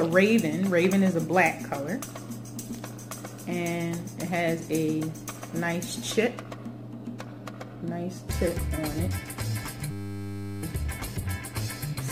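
From 9.91 to 10.63 s a system hang loop sets in. The system froze while the hardware kept replaying one 10 ms buffer slice, giving a steady 100 Hz buzz and losing roughly 0.7 s of audio. A spectrogram shows flat lines every 100 Hz, and the waveform repeats identically.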